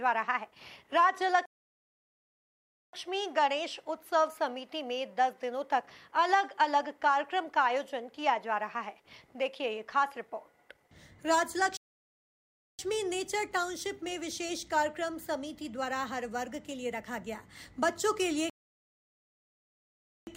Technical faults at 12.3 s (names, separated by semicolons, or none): playback stall